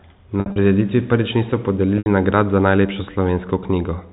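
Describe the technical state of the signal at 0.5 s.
At 0.5 s the signal is in a stretch of packet loss with pitch repetition, running from 0.40 to 0.56 s, just before "prireditvi prvič niso". About 120 ms of audio is missing, scattered over 160 ms, which fits roughly six 20 ms packets. The receiver fills each hole by looping the last pitch period. The short gaps sound like a brief buzzy hold. The longest run, 60 ms, fades toward silence before the speech cross-fades back in.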